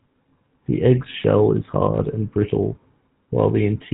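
GSM full-rate codec damage runs through the whole speech clip, giving it a plainly audible buzzy, gravelly roughness. The codec rebuilds the voice from a vocal-tract model driven by regularly spaced excitation pulses. That points to roughly 13 kbps coding, and nothing survives above 3.8 kHz, so the sound is dull and band-limited.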